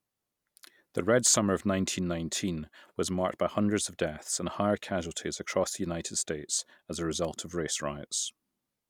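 At 7.25 s a sharp snap cuts across the speech. It is an electrical switching spike. The snap is very short, only a few milliseconds long. It sits on top of the speech rather than replacing it. Its level is modest, peaking somewhere around -30 dBFS. The likely cause is a nearby switch, motor or static discharge arcing briefly, with the audio line picking up that burst of interference.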